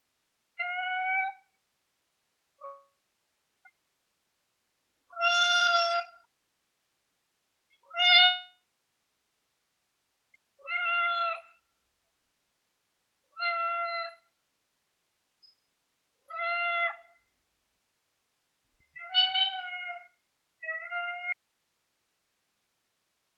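At 2.65 to 3.67 s and again at 8.25 to 10.36 s, the sound breaks into a decaying buzz or hiss that fades to silence, the likely result of a long network dropout: about 1 s and 2.1 s of audio never arrived, and the receiver only briefly extended the last sound. On a waveform each event shows a short tapering tail and then a flat line (0.71 s, then 1.71 s). A spectrogram shows smeared, fading energy and then a blank band before the sound resumes.

From 21.33 s to the end, the sound cuts off abruptly and leaves only faint hiss, roughly 50 dB below the signal. The likely cause is an audio dropout to a faint residue, with the path still live after the break. The waveform collapses at once to a thin noise floor with no fade, and the spectrogram shows a faint, even wash of broadband noise.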